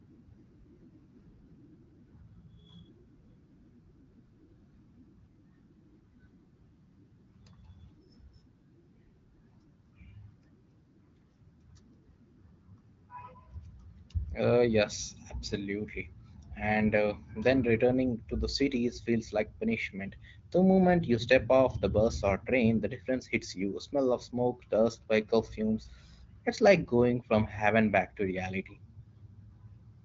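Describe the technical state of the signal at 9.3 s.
At 9.3 s the speech is intact, with no fault present, and the AMR wideband (HD Voice) codec carries it as expected.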